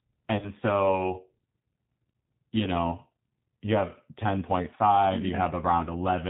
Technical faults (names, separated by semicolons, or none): G.729 codec; VoIP packet loss concealed by the speech codec